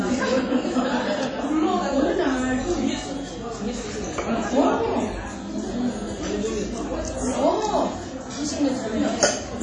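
A recording of everyday sounds, and it's carrying WMA compression damage from start to finish. The top end stops dead around 10 kHz, and there's a smeared, ringing quality with a hiss that swells and fades along with the sound. Quieter detail drops out entirely in places. That points to a long-block transform codec likely run at a low rate, something in the region of 32 kbps, where weak components get zeroed and quantisation noise spreads over tens of milliseconds.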